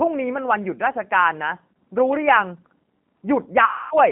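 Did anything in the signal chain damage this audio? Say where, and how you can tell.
Yes. The codec stage damaged the whole clip. From start to finish the speech has the slightly rough, synthetic texture of G.729, with nothing below about 150 Hz or above about 3.5 kHz, and the coding damage is plainly audible. The sound is consistent with 8 kbit/s CELP coding. This codec rebuilds each 10 ms frame from a vocal tract filter, a pitch predictor and a handful of pulses, so the fine detail of the original waveform is lost.

The network stage added a dropout near the end. From 3.65 s to 3.97 s, VoIP packet loss concealed by the speech codec turns the speech into a stretched sound that fades out. About 260 ms of audio is missing, which fits roughly 13 lost packets. The decoder keeps repeating its last pitch and filter at lower gain each frame. Because each frame depends on the one before, the speech stays weak or distorted for tens of milliseconds after packets return.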